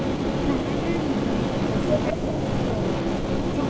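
From the start to the end at about 3.7 s, a delayed copy of the speech trails it by 174 ms, somewhat louder than the direct sound. This echo leak is likely from an echo canceller failing to remove loudspeaker pickup. On a spectrogram, the speech pattern repeats shifted right.

From 2.13 to 2.17 s the speech dips sharply by roughly 10 dB for about 40 ms. This is likely speech suppressed in double talk, and it shows as a brief notch in the waveform envelope.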